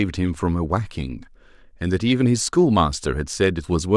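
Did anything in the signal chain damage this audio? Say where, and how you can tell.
Yes. A block of digital silence at 0.34 s, about 5 ms long, makes a hard-edged tick in the speech. This points to a driver or buffer underrun that zeroed one output block, which fits a 128-sample buffer.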